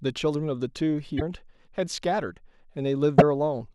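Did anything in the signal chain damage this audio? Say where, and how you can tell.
Yes. At 1.16 to 1.22 s and again at 3.18 to 3.22 s the speech skips ahead into a brief glitch, roughly two 26.1 ms frames long. The likely cause is a broken MP3 bit reservoir at the codec stage: frames after a cut reach back for borrowed data and decode the wrong bytes.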